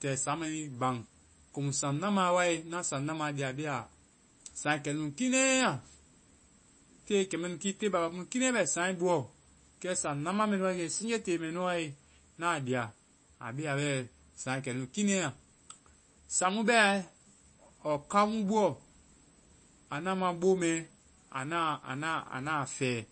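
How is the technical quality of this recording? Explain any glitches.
The recording is noticeably degraded throughout by MP3 compression. Nothing is heard above about 8.3 kHz, so the speech sounds dull and boxed-in, and there is a watery, swirling quality with metallic chirps on s sounds and smeared consonant attacks. The likely cause is an encoder starved of bits, consistent with a bitrate around 32 kbps, so it cuts off the treble and drops quieter frequency detail that flickers in and out from frame to frame.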